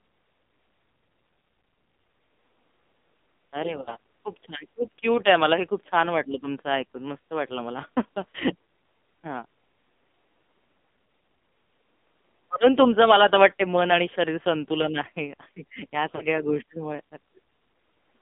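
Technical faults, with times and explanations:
Throughout: AMR narrowband mobile codec. The sound is squeezed into a band of about 250 Hz to 3.6 kHz, so it is thin and muffled. The codec damage is heavy. Speech comes out buzzy and synthetic, which fits a low rate of about 5.9 kbps. At that rate the encoder rebuilds the voice from a coarse vocal tract model driven by only a few pulses, so fine detail is lost.
3.82 to 3.97 s and 16.16 to 16.22 s: lost AMR speech frames. Each time the speech briefly smears and dips. About 40 ms of signal is missing each time, which points to two failed 20 ms frames. The decoder fills the gap by repeating its last good pitch and vocal tract settings at falling gain. That gives a short drawn-out warble rather than clean silence. The sound then returns briefly rough.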